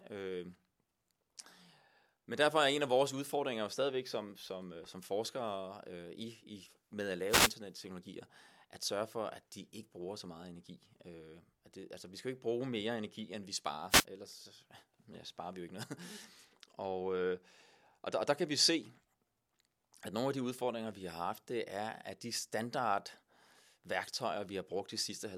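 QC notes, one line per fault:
7.28–7.52 s, wireless microphone noise hit: right after "med at", a quarter-second swish of static sweeps over the speech as the FM radio link fades and receiver noise rises through it. Unlike a digital wireless dropout, the sound doesn't go silent; it's buried under noise.
13.89–14.05 s, wireless microphone noise hit: after "energi end vi sparer", a shorter burst of about 160 ms, the same rushing static from another brief signal fade rather than a steady hiss floor.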